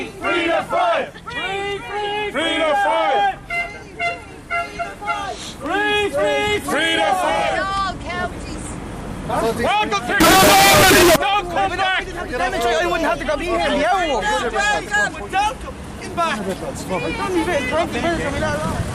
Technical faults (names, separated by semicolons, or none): float read as integer